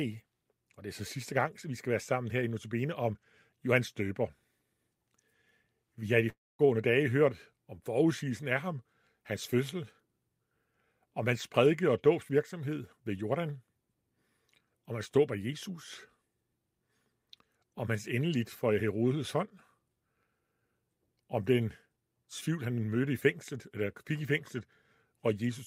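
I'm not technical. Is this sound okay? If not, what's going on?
No. A long network dropout occurs from 6.29 to 6.61 s. The speech cuts out, a fading buzz briefly fills the gap, then about 0.22 s of silence follows before speech resumes. About 0.3 s of audio was likely lost in transmission and never arrived.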